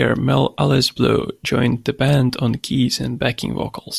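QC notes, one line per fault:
No faults found on this speech recording.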